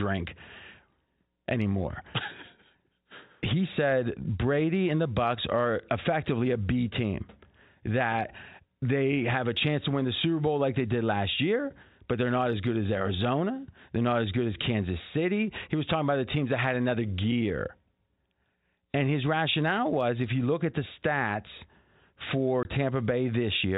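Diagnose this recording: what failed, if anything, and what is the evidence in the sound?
Network stage: packet loss filled with silence. Right after "at the stats for", the speech drops out from 22.63 to 22.65 s, a 20 ms hole with abrupt edges. The gap length fits two consecutive 10 ms packets lost, with the receiver inserting zeros instead of concealing. The G.711 telephone coding keeps the audio band-limited below 4 kHz.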